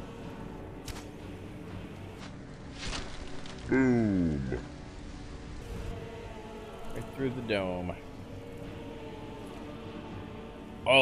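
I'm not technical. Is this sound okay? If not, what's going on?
No. From 2.20 to 5.62 s there's a section at the wrong speed: sound plays at 0.66x, sagging about seven semitones lower, likely from a clock mismatch.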